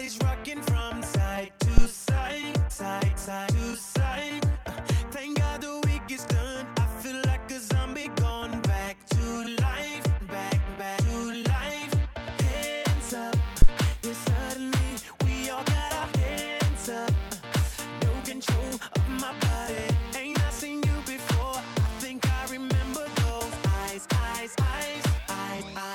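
At 1.78 s and again at 13.62 s a deep phantom power thump appears, peaking at about -5 dBFS and dying away within roughly 20 ms. A supply switching on a live input pushes a voltage step through the coupling capacitors. Unlike handling noise, each thump is a single clean low-frequency pulse without rustle.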